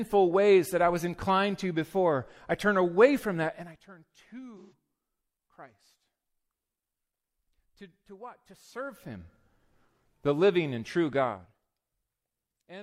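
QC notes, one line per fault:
4.57 to 4.72 s, AAC frame loss with concealment: about 128 ms of audio dropped out, which points to three lost frames, and the decoder papered over the gap by reusing the last good spectrum. That's why this bit of speech goes smeared and phasey instead of silent.
8.50 to 9.33 s, zipper noise: right after "to what" the level shifts by roughly 20 dB in 1 dB steps, around twenty a second, with no smoothing between them. Every step leaves a tiny click, so you get a fine zipping riding on the speech.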